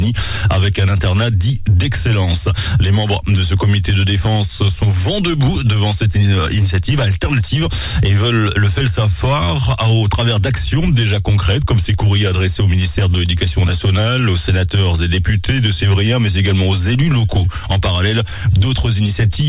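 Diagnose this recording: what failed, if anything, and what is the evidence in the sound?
Nothing failed, and the sound gives no evidence of any fault.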